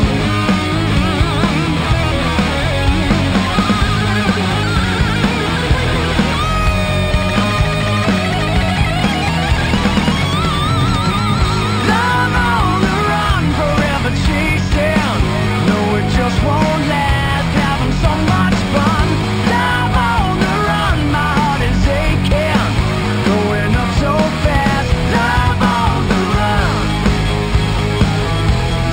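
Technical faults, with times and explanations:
Throughout, imaging from linear upsampling. Straight-line interpolation, which fits a 12 kHz source, dulls the top near 6 kHz. A faint mirror copy, roughly 25 dB down, adds a metallic shimmer from 6 to 12 kHz.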